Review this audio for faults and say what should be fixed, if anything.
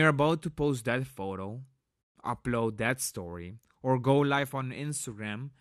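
The speech carries MP2 compression damage from start to finish, plainly audible as a dull top end with a gurgling, granular edge. The likely cause is MPEG Layer II coding at a starved bitrate, around 80 kbps by the sound of it, where upper sub-bands switch off and on and the surviving bands are coarsely quantised. A plain low-pass filter would dull the sound evenly, whereas here the high end flickers and the grain rides on the speech. Re-encode from the original source at a higher bitrate, or use a more efficient codec, to prevent it.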